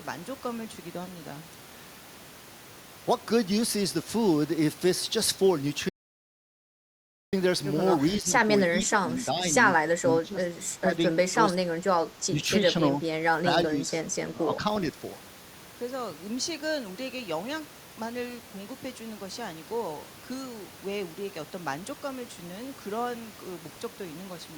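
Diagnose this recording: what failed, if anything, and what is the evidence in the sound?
The speech cuts to dead silence with no room tone from 5.89 to 7.33 s, an audio dropout to silence at capture, likely lost input while zeros kept recording.

The speech dips by about 5 to 20 dB at 8.21, 8.71, 10.0, 10.79, 11.32, 12.29, 13.43 and 14.32 s. This is speech suppressed in double talk, likely from call-processing echo cancellation attenuating the talker.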